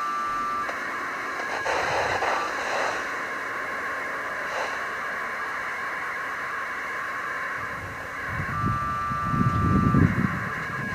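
Compressed frames skipped at 0.70, 2.47, 4.26, 7.67 and 10.25–10.27 s: whole frames went unplayed, so the audio jumps ahead by roughly a tenth to a fifth of a second at each point.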